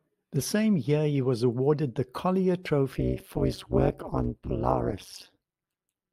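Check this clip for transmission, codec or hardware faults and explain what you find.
There's one fault here, and it's hard to miss once it kicks in. From 2.92 s right through to the end of the speech you get overlap-add ripple. The audio was chopped into windowed frames and stitched back together with an overlap whose gains don't add up to a flat level, so the loudness dips and recovers every frame, around 200 times a second and by about 60 dB. The result is a harsh, metallic buzz riding on everything.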